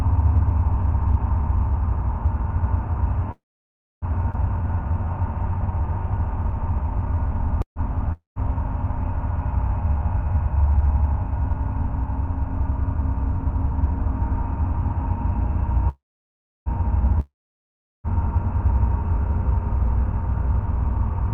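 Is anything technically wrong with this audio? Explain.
Yes. This recording of everyday sounds passed through a call path whose codec trims the top end near 12 kHz. It has several network and jitter buffer faults.

Call audio freeze, three times: 3.31 to 4.05 s, 7.62 to 7.79 s, and 15.89 to 16.69 s. Packets were likely held up, so the buffer ran dry. The last sound continues as a fading buzz and then goes quiet. That quiet lasts about 0.63 s, 0.11 s and 0.68 s. The audio then resumes where it stopped. Nothing is lost. The sound is simply delayed.

Skip ahead at 4.32 to 4.37 s. Audio was already queued, and roughly 0.4 s of it was dropped. There is only an 18 ms join. The sound jumps abruptly forward, and the sides of the cut meet almost directly.

Jitter buffer slow-down from 4.62 to 10.39 s. The buffer was short of reserve. It repeated single pitch periods and bits of pause, adding 231 ms in total. 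Playback runs at 96% speed with the pitch unchanged. Sounds are slightly drawn out.

Long network dropout, twice: 8.12 to 8.39 s and 17.20 to 18.07 s. No audio arrived, likely because of lost packets. The last sound is stretched into a fading hiss, followed by silence of about 0.14 s and then 0.74 s. The audio returns further on. About 0.24 s and 0.84 s are missing for good.

Jitter buffer speed-up, twice: 10.46 to 11.03 s at 115% speed, and 18.8 to 21.23 s at 104%. Each time the buffer held too much audio. Short pitch-period pieces were cut out, roughly 0.1 s per stretch. The pitch stays the same. The first stretch sounds noticeably hurried. The second is too slight to sound hurried.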